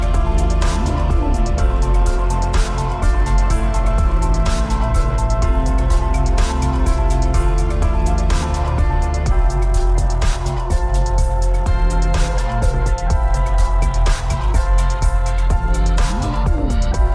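Nothing in this recording stands out as a technical fault, so there's nothing here to flag.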